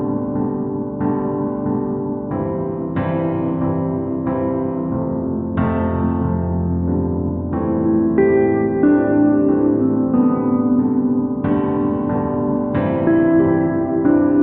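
No technical faults can be heard anywhere in this audio.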